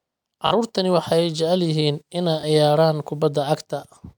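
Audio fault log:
0.47–0.51 s, repeated buffer. A short piece of speech, about 21 ms long, plays three times in a row with a hard join at each repeat. Fresh audio arrived late, so the last block, which fits a 1024-sample buffer, was replayed. This is heard as a brief stutter. About 40 ms of real audio is missing.
2.41–2.43 s, repeated buffer. The same fault occurs once more. A block of about 21 ms plays twice, joined abruptly. It is heard as a quick stutter. Roughly 20 ms of the real audio is lost.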